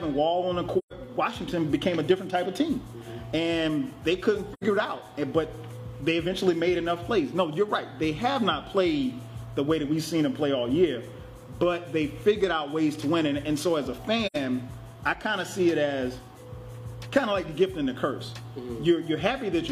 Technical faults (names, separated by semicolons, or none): AAC frame loss with muting